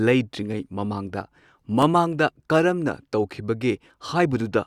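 A block of digital silence occurs at 1.82 s in this speech. For about 2.5 ms, the sound cuts out and then resumes, with no fade on either side. Because the gap is so short, it is heard as a tick or dip rather than as silence.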